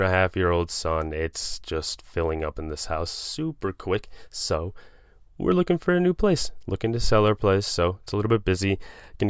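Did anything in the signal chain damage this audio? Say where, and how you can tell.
No, nothing along the chain seems to have touched this speech recording; I can't hear any point where a stage left its mark on the sound.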